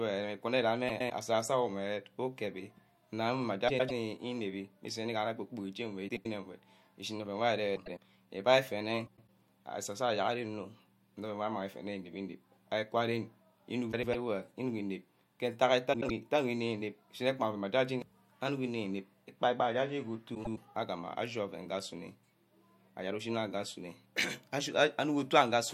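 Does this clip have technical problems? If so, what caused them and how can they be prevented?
Yes. Frames out of order occur at 0.88, 3.68 (just after "ukebi nna mma"), 6.08, 7.76, 9.06, 13.92, 15.93 and 20.35 s. Two neighbouring blocks of about 105 ms (78 ms at 6.08 and 15.93 s) play swapped, producing a garbled flutter. Sequence-numbering the frames and reordering them in a jitter buffer before decoding prevents this.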